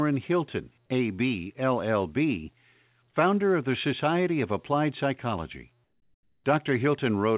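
From 5.84 to 6.44 s, comfort noise replaces the background: a steady, featureless hiss about 12 dB quieter, likely from discontinuous transmission filling a pause.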